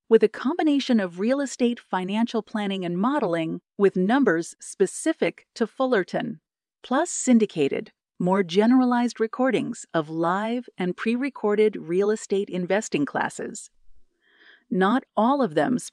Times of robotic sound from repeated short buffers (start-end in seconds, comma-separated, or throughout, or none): none